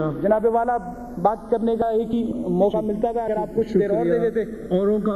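A slow flanging sweep runs through the whole clip: channels drifting apart, their clocks differing by around 100 ppm, so the offset creeps to about half a millisecond.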